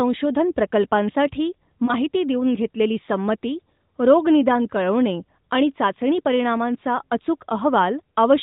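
At about 1.86 to 1.95 s there's a lost AMR speech frame. A single 20 ms frame got dropped, so the decoder patched it from the previous frame, and you hear a quick dip or warble.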